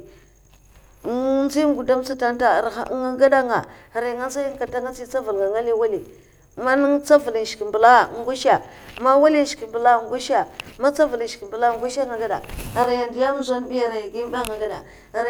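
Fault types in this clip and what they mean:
Channel delay (comb filtering): from 12.84 s to the end, one channel lags about 20 ms; summed to mono, evenly spaced notches from around 20 Hz make the speech sound rough or slightly doubled.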